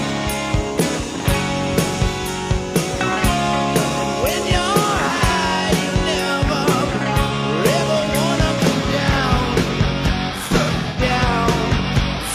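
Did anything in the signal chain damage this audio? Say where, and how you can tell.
Yes. The damage is at the codec stage, as AAC frame loss with concealment. At 7.26 to 7.32 s there is a brief smeared, phasey patch, about 43 ms long, which fits one lost frame. From 10.45 to 11.01 s the sound turns noisy and smeared again. About 213 ms is missing there, scattered across 512 ms, and the longest gap is around a tenth of a second. The decoder filled each gap by reusing the last good spectrum.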